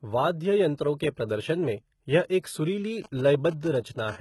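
Throughout the clip the speech carries heavy codec damage, likely from HE-AAC compression at a rate that fits about 16 kbps. The treble is rebuilt from copied lower bands, so s sounds turn gritty and metallic. A spectrogram shows smeared, repeated-looking high-frequency texture above a crossover.

From 3.04 to 4.00 s, GSM signalling bursts come from a nearby 2G phone whose radio pulses the audio circuit rectifies. They sound like a galloping dit-dit-dit of short 217 Hz buzzes, roughly 15 dB below the speech. On a spectrogram they appear as clustered vertical stacks of harmonics.

From 4.08 to 4.16 s, a GSM phone buzz from a phone in a call gives a hard, raspy 217 Hz tone with many harmonics, about 18 dB below the speech. A spectrogram shows evenly spaced horizontal harmonic lines. The waveform shows regular pulses every 4.6 ms.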